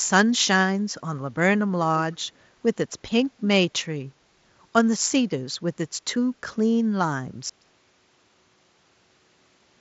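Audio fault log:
2.12–2.16 s, echo leak: a brief, very faint delayed copy of the speech, about 40 dB down and trailing by 188 ms, likely from a far-end loudspeaker whose echo canceller let a scrap through. It is a discrete repeat, not a smooth reverb tail.
7.50 s to the end, audio dropout to a faint residue: the speech cuts off abruptly, leaving only hiss roughly 45 dB below the signal, likely a lost input with the path after it still live. A pause or fade would never switch so suddenly.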